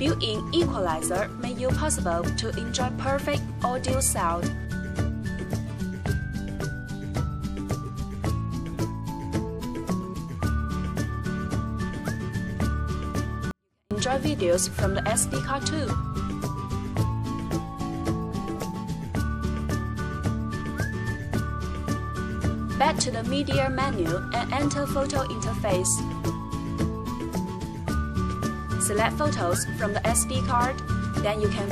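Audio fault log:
13.51 to 13.91 s, 24-bit alignment error (too quiet): samples packed as 24-bit integers in the low bytes of each 32-bit word were read back as full 32-bit integers, so every value lands 8 bits too low. For about 0.4 s the sound stays clean but falls roughly 48 dB at once, nearly vanishing.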